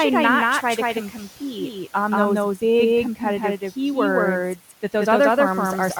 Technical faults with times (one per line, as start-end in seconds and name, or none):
0.00-6.00 doubled audio track
0.94-1.76 speech cut by the noise suppressor